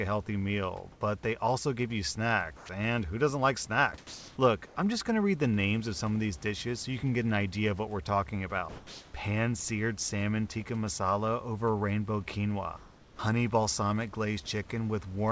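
Comfort noise in place of the background appears at 0.92 s (90 ms), at 4.67 s just before "I'm just going to" (90 ms), from 8.69 to 9.14 s, and from 12.77 to 13.19 s between "tikka masala over rainbow" and "honey balsamic". Each time the room's detailed background, about 27 dB below the speech peaks, turns into a smooth, featureless hiss. This is likely the receiver filling gaps with synthetic noise while the sender pauses under discontinuous transmission. The last patch is about 3 dB quieter than the real background.

Sound dropped by the voice detector occurs from 2.57 to 2.69 s, where about 90 ms of speech is lost, and from 3.98 to 4.37 s right after "and who doesn't like", where about 140 ms is lost. In both places the speech drops out and then returns. The likely cause is the detector mistaking speech for background and halting transmission.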